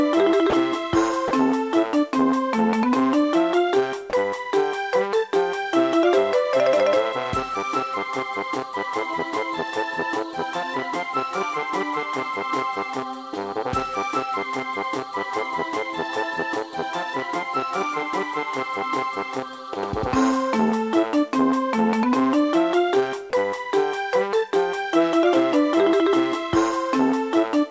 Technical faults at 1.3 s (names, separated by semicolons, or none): sound dropped by the voice detector